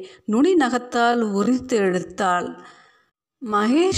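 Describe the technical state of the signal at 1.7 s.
At 1.7 s the speech sits inside a time-stretched section running from 0.8 s to the end. It plays at about 0.59 times normal pace with unchanged pitch. Short pieces were likely repeated to lengthen it. This makes the speech drag.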